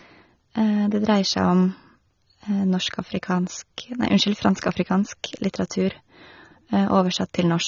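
From the start the speech sounds dull and smeared, with a fizzy, warbly edge on the sibilants and nothing above about 6.9 kHz. That's likely AAC compression, squeezed hard enough to point to a low bitrate, around 24 kbps. At 4.72 s there's a sharp snap sitting on top of the audio, most likely an electrical switching spike: a nearby switch or discharge arcing briefly and getting picked up by the line.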